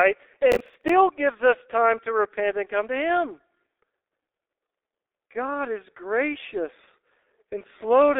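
Throughout, the speech carries heavy G.723.1 codec damage. The coder's slowly updated voice model, at a rate that points to about 6.3 kbit/s, leaves the speech muffled and hoarse, with blurred consonants. A spectrogram shows energy confined to roughly 300 Hz to 3.6 kHz, with nothing above 3.7 kHz.

From 0.52 to 0.89 s, just before "gives us time to", processor overload crackle tears through the sound. The processor missed about fifteen deadlines on buffers of roughly ten milliseconds, replaying stale audio with hard edges. The waveform shows repeated fragments with abrupt steps, and the spectrogram shows dense vertical broadband streaks.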